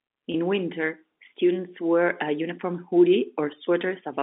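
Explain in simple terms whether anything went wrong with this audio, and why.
One short fault, at 0.32 s: packet loss with pitch repetition. About 20 ms of sound went missing, which fits a single lost packet, and the receiver filled the hole by repeating the last bit of voice pitch. It sounds like a brief, slightly buzzy hold just before "winter students wear a".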